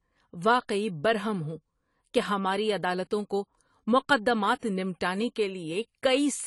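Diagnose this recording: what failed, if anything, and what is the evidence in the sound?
The codec stage has failed. Throughout, the speech is dull, with nothing above 11.4 kHz and a warbling, smeared texture on sibilants, which fits a low-bitrate setting near 32 kbps. The likely cause is AAC compression. Unlike a plain low-pass filter, it leaves fizzy, unstable high bands.

Pre-echo appears from 4.59 to 4.63 s, a short hiss lasting about 37 ms just before a sharp attack. The codec spread the loud onset's quantisation noise across the quiet start of its block. A click or dropout would land on the attack itself, not before it.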